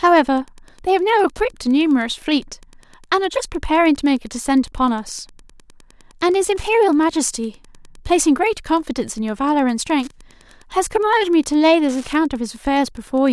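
Running under the speech from start to finish there's a steady, faint ticking, a bit under ten clicks a second. That's Wi-Fi interference: a radio sitting close to the audio circuitry sends a beacon every 102.4 ms, and the circuit rectifies each burst into an audible tick. It sits well down, roughly 35 dB below the speech.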